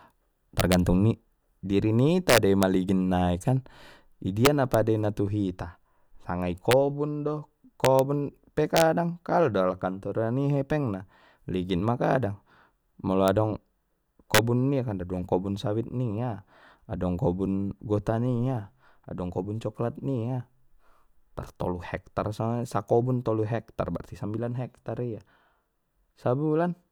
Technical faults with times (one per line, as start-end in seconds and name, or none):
0.60-0.74 integer overflow
2.29-2.63 integer overflow
4.45-4.74 integer overflow
6.71 integer overflow
7.85-7.99 integer overflow
8.77-8.81 integer overflow
13.28 integer overflow
14.34-14.38 integer overflow